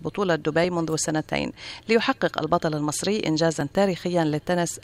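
At 0.64, 1.63 and 3.61 s the sound skips briefly, losing roughly 10 ms each time, likely audio missing between chunks of about 1 s.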